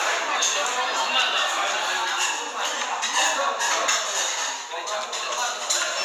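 At 2.01 s the recording software likely failed to collect an incoming block of samples before the hardware overwrote it, a dropped buffer (overrun). The lost block is not replaced with silence; the audio on either side is butted straight together, so the sound skips forward by only a few milliseconds. What reaches the ear is a brief jump in the sound at the seam, with the sound carrying on immediately afterwards.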